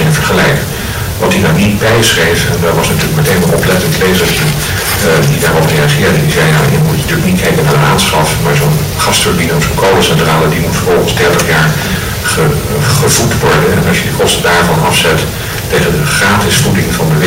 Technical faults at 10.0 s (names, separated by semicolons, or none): hard clipping